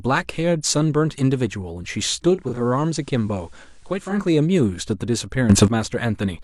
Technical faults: digital radio blending to analogue; sudden gain jump

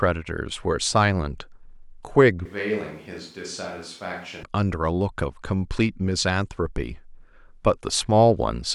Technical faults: switch to a distant microphone

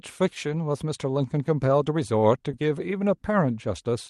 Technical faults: lost packet rebuilt from error correction; short concealed packet loss

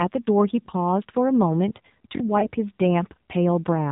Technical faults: AMR narrowband mobile codec; repeated buffer; lost AMR speech frames

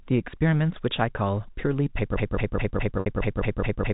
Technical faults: broken-record loop; packet loss with pitch repetition

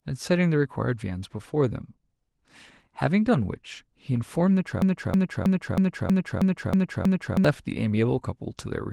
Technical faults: broken-record loop

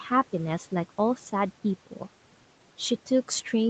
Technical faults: speech cut by the noise suppressor

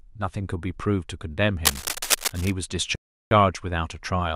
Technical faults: cable scratch noise; rebuffering stall

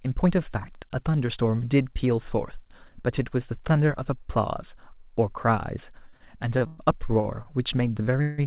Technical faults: repeated stalls (stutter); call audio freeze

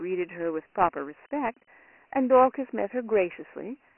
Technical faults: Dialogic VOX ADPCM

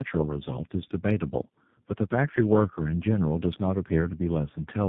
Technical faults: tandem speech coding

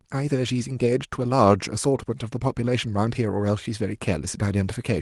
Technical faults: none

